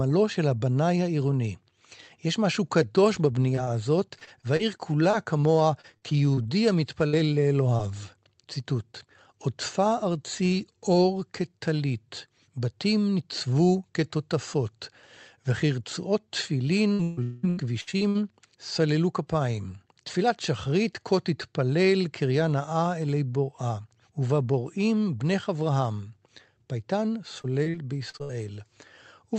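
From 3.47 to 7.99 s, repeated packet loss gives a choppy, robotic sound: 18 short holes, none longer than 61 ms, are patched by continuing the previous sound. On a spectrogram these show as brief, smeared, overly steady harmonic strips; the waveform shows short runs of copied cycles.

The same repeated packet loss returns from 16.93 to 18.17 s. There are seven gaps, the longest 141 ms, and about a third of that stretch is rebuilt.

Within it, from 17.23 to 17.45 s, a 0.2 s stretch is held and faded out as a buzzy continuation rather than real sound, most likely a brief long network dropout. On a spectrogram it looks like a frozen band that dims. The waveform shows a decaying repeated shape, and the audio resumes afterward with that piece missing.

A last burst of repeated packet loss from 27.38 to 28.49 s adds six gaps, the longest 56 ms, with the same short, stuttering fills. Across the clip the spectrum tops out near 8 kHz, consistent with a wideband Opus call path.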